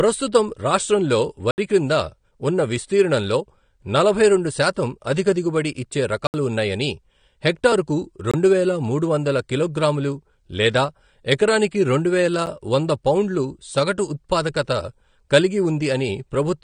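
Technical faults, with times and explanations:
Throughout: AAC compression. The speech has the dull, smeared quality and the fizzy, warbling sibilants of a low-bitrate perceptual coder, plainly audible here, most likely AAC-LC at around 32 kbps. Coarse quantisation of the spectral lines blurs detail even though content reaches about 20.6 kHz.
1.51 s, 6.27 s, 8.31 s, 12.46 s: block of digital silence. The signal drops abruptly to silence and returns with no fade. The gaps last 70 ms (just before "క్రింద ఉన్న విస్తీర్ణంలో నలభై"), 70 ms (between "శాతం అధిక దిగుబడి ఇచ్చే" and "ఉన్నాయని హెక్టరుకు"), 23 ms, which fits an unfilled 1024-sample buffer, and a 9 ms tick between "కిలోగ్రాములు లేదా ఎకరానికి రెండువేల" and "వంద పౌండులు సగటు ఉత్పాదకత".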